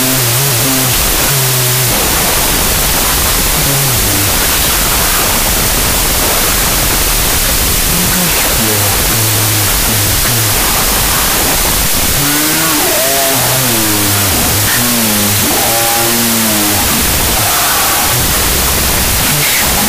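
Harsh noise throughout buries a half-speed, octave-low version of the sound. This is a wrong sample width fault, consistent with 32-bit float data misread as 16-bit integers.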